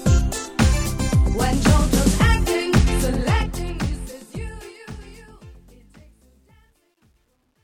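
A fade-out running from about 3 s to the end at 7.64 s passes through a gain stage that throws away the low-order bits without adding dither, which fits a path only 11 bits deep. The result is truncation distortion on the fade. From 3.06 s the decaying sound takes on a grainy, stepped edge as the waveform collapses into coarse square steps. From 5.21 s to 7.64 s it is at its worst and sounds gritty.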